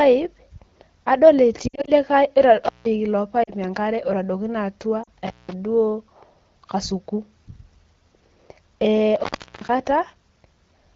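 A speech clip carried over AMR-WB wideband, with two kinds of trouble. Lost AMR speech frames cause warbly dips at 1.68 to 1.92 s (scattered gaps, longest run about 60 ms), 3.43 to 3.51 s and 5.04 to 5.09 s, where the decoder stretches the last good frame and fades it. Intermittent contact, probably a loose plug or cable, gives crackly dropouts to faint hiss at 2.64 to 2.86 s, 5.26 to 5.53 s and 9.16 to 9.69 s, the last open for about 375 ms.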